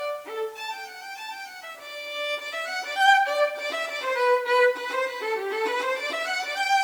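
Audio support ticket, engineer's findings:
Nothing stood out on listening; no symptom to log against any component.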